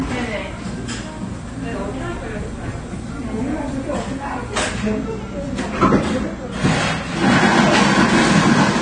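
Throughout, the audio was likely first squeezed through a low-bitrate codec and then saved again at a high bitrate, so low-bitrate audio saved at a high bitrate: nothing sounds above 9.5 kHz, leaving the everyday sounds dull, with smeared, watery detail that the second encoding cannot restore.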